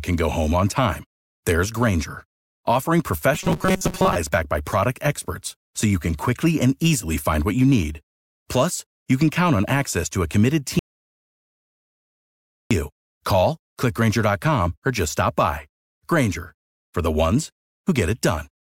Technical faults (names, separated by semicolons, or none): robotic sound from repeated short buffers; audio dropout to silence